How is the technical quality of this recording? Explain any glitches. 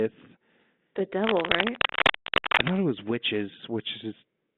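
The recording has two audible faults over narrowband telephone audio, limited to about 200 Hz to 3.6 kHz and consistent with 32 kbit/s G.726 ADPCM.

Cable scratch noise runs from 1.24 to 2.70 s. Dense, ragged scratching sits roughly level with the speech, likely from a worn connector's fluctuating contact. It shows as irregular broadband speckle on a spectrogram.

Packet loss on an ADPCM call occurs from 2.41 to 2.46 s. About 40 ms drops to silence, which fits a couple of lost packets. The decoder's predictor then misaligns, so the speech returns slightly distorted. This appears as a hard-edged blank gap on a spectrogram.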